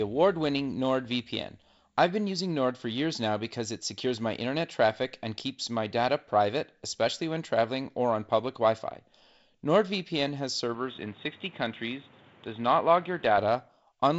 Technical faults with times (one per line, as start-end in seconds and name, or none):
10.74-13.38 input switched to a poorer device